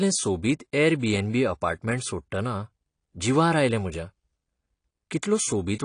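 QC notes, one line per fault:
Throughout, AAC compression: the speech is dull and smeared, with nothing above 10 kHz and a plainly audible warbly fizz on sibilants. It's likely a starved AAC-LC encode, which fits roughly 32 kbps, so the encoder dropped the top band and coarsened the rest.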